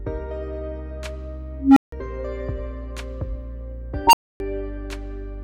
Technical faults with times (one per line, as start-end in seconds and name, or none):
1.57-1.92 unstable filter
4.07-4.40 unstable filter